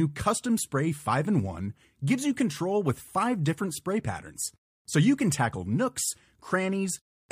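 A speech recording with no audible technical faults anywhere in the signal.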